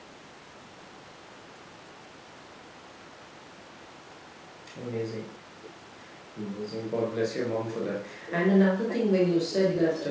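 Echo leak runs from 0.71 to 4.92 s and 5.09 to 7.1 s as a faint copy of the speech trailing 454 ms behind. It then grows much stronger at 7.58–8.36, 8.88–9.12 and 9.33–10.1 s, approaching the direct level, likely from a loudspeaker end whose echo canceller lets its pickup through.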